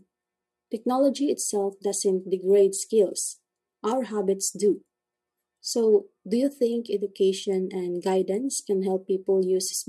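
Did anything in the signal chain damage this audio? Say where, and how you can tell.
No, nothing along the chain from capture to playback has left any audible damage on this speech recording.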